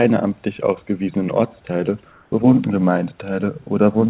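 From 2.12 to 2.32 s, a 200 ms pause in the speech loses its room background, about 39 dB below the speech, to a steady, featureless hiss about 3 dB different in level. This is likely comfort noise in place of the background, synthesised by the receiver during discontinuous transmission.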